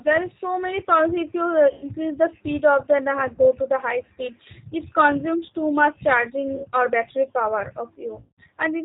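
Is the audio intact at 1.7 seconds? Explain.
No. VoIP packet loss concealed by the speech codec begins at 1.73 s and runs to 1.85 s. About 80 ms of audio went missing, which fits four lost 20 ms packets. The decoder bridged the gap by extending its last pitch and vocal tract filter at falling gain, so the speech smears into a fading buzzy tone or coloured noise, and because each frame builds on the one before, it stays weak or distorted for a short while after the packets resume.

Underneath this, the G.729 codec is plainly audible throughout at 8 kbit/s. It rebuilds speech from a filter, a pitch predictor and a few pulses per frame, and passes nothing above 4 kHz, so the voice sounds dull, slightly rough and synthetic.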